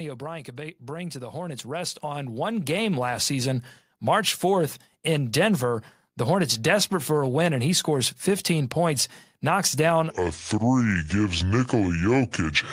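A speech recording with two faults. From 0.56 to 3.57 s, automatic gain rising: the gain control judged the input too quiet and kept turning it up, so the voice and the background noise swell together by about 12 dB over roughly three seconds. From 10.1 s, just after "points knocks down", through to the end, a section at the wrong speed: this part was likely played against the wrong clock at 0.666 times its recorded rate, so the voice drags and drops by about seven semitones, turning deep and slow.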